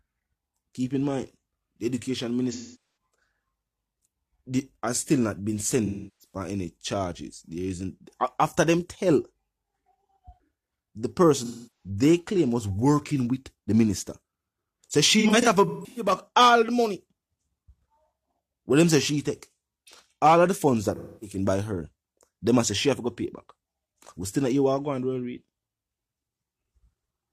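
AAC frame loss with concealment hits at 2.52–2.81 s, 5.85–6.34 s, 11.44–11.89 s, 15.2–16.12 s and 20.96–21.36 s. The decoder rebuilds missing frames from the last good spectrum. Each patch sounds smeared, noisy or phasey. Near 15.2 s, short dropouts scatter, none much over 150 ms.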